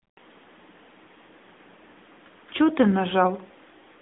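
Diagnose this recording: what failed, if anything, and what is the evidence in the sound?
The speech passed through an AMR narrowband mobile codec at the codec stage for the whole clip. Nothing survives above 3.8 kHz and the band sits between 250 Hz and 3.6 kHz. Plainly audible buzzy, synthetic coding fits a high-rate mode of around 10 kbps.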